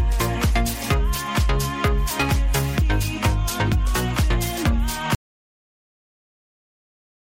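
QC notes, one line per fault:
5.15 s to the end: audio dropout to silence. The sound cuts off mid-flow at 5.15 s and never returns. The final 2.2 s or so are silence, with no room tone or noise floor left. A silent gap like this means the recording chain kept running with no input. The likely cause is a lost input, such as a disconnected device, a failed link or a mute. Whatever was happening after the cut is gone.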